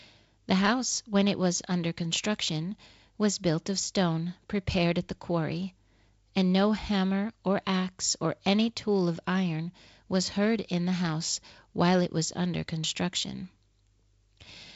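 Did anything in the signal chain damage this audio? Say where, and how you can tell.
No, the speech has passed through G.722 wideband telephone coding at what sounds like a 48 kbit/s mode, with nothing above about 7.7 kHz and only light coding grain, and none of the chain's stages has damaged it.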